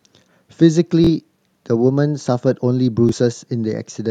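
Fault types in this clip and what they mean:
Bluetooth stutter: wireless packets arrived late or were lost, so the receiver replayed its last slice of speech, repeating briefly at 1.04–1.09 s and 3.09–3.13 s. A waveform shows identical short segments copied end to end; a spectrogram shows abrupt vertical seams.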